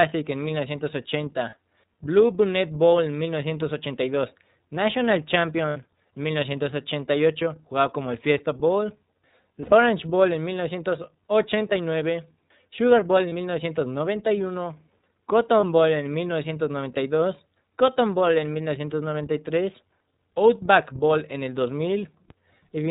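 Throughout, the speech passes through the iLBC codec, which fits its 13.33 kbps mode. Nothing above 4 kHz survives. The voice sounds plainly rough and synthetic.

Lost iLBC frames occur at 1.5, 5.7, 9.62, 13.29 and 15.6 s. Each gap, 30 to 90 ms long, becomes a held, buzzy vowel. The voice then recovers at once.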